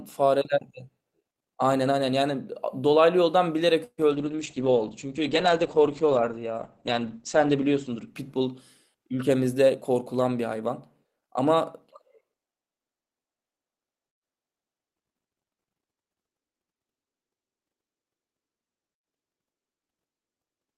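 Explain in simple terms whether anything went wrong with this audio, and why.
Something did go wrong. From about 4.14 to 9.13 seconds there's a call bitrate drop. The call's estimate of the connection fell, so the call squeezed the speech into far less data. The voice goes muffled and rough, losing its crisp top end above roughly 8 kHz, and it stays at its worst for just over three seconds before the quality climbs back and sounds clear again.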